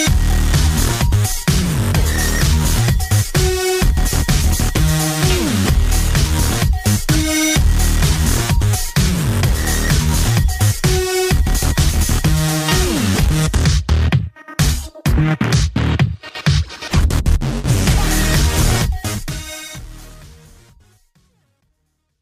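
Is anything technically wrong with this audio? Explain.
No, nothing technically wrong is audible, and the smooth fade-out starting around 18 s and running to the end is a deliberate editing move with no click or hard edge.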